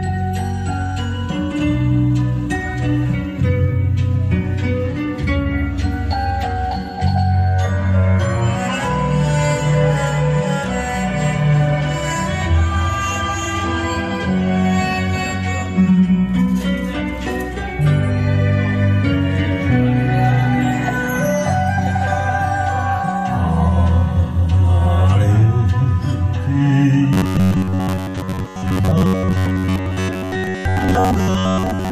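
The last stretch of the sound, from 27.13 s to 31.91 s, turns into robotic sound from repeated short buffers. A rigid, metallic buzz pinned at 93.8 Hz sits over the sound while it still roughly follows its original contour. That pitch matches a repeated slice about 10.7 ms long, with repeats filling around 70 percent of the time. The likely cause is audio arriving too seldom, so the playback loops the last chunk instead of the missing material. Unlike ring modulation, the buzz holds one fixed pitch and real content is skipped rather than shifted.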